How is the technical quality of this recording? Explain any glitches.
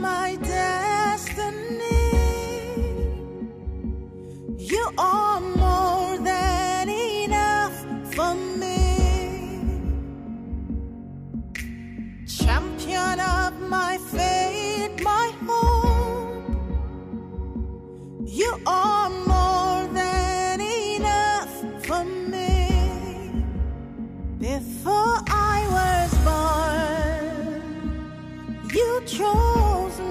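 Nothing in this recording stands out as a glitch; it just runs along smoothly with no interruptions or oddities to point to.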